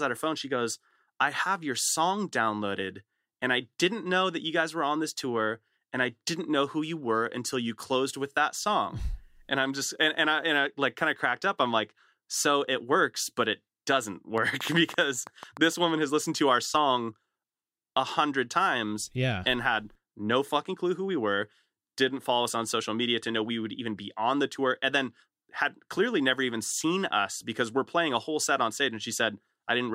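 From 14.38 to 15.58 s, just before "woman has listened to", a train of clicks rides over the speech: about ten sharp, similar pulses at an uneven pace averaging 7.55 per second, the loudest peaking around 5 dB above the speech. They are likely interference from nearby equipment or a faulty connection or power supply. Unlike random crackle, the clicks share one shape and stay audible between syllables, sounding like ticking laid on top of the audio.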